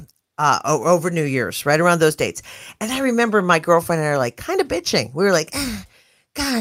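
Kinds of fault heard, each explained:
Nothing here calls for a line of its own, since the speech comes across without any technical fault worth pointing out.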